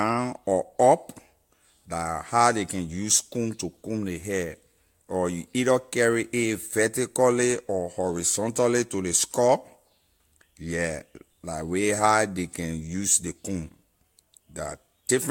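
Speech recording; no technical faults detected anywhere in the audio.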